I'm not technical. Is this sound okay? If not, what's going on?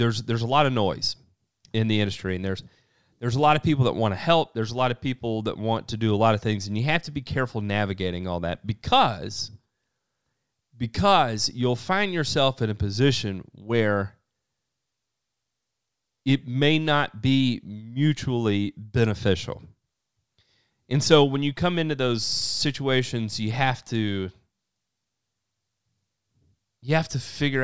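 Yes, this sound is okay, and there's nothing going on that needs fixing.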